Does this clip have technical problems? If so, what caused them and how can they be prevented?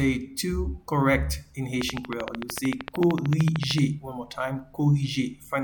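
Yes. A train of clicks runs from 1.82 s to 3.79 s: about thirty regular clicks, 13.2 per second, standing roughly 15 dB above the surrounding audio. The likely cause is interference from nearby equipment or a faulty connection or power supply injecting a repeated pulse. A waveform would show evenly spaced sharp spikes, and a spectrogram a row of thin vertical broadband lines. Shielded cables, secure connectors, a clean power supply and distance from other electronics prevent this.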